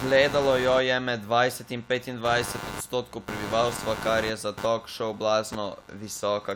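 From start to finish the speech carries computer activity noise: a buzzy, chirping scratch pulsing at around a hundred times per second, sitting fairly high, somewhere near 15 dB below the speech. It comes from processor or graphics load currents disturbing the ground the audio circuit shares, so it follows the computer's activity rather than the speech. A spectrogram shows a comb of harmonics spaced near 100 Hz, and the waveform shows regular spiky pulses riding under and between phrases.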